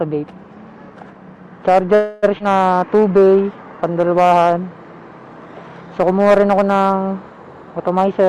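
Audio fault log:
1.95–2.25 s, call audio freeze: the last bit of sound gets stretched into a fading buzzy tail for about 0.28 s, then carries on right where it stopped. Nothing's lost, just a gap inserted. The likely cause is held-up packets draining the jitter buffer.
2.39–2.42 s, skip ahead: playback lurches forward, dropping roughly 0.15 s of audio. There's only a tiny 13 ms patch before the two sides are butted together. A chunk was discarded while later audio was already queued, so it jumps rather than pauses.
2.74–4.08 s, jitter buffer slow-down: the sound drags at about 89% speed with the pitch unchanged, gaining 160 ms overall. The receiver was rebuilding its reserve by repeating single pitch periods over and over, which gives that drawn-out feel.
7.93–8.23 s, jitter buffer speed-up: things rush along at about 110% speed, same pitch, shaving off around 40 ms. The buffer held more than its target, so the receiver clipped out short pitch-period pieces repeatedly to pull the delay back down.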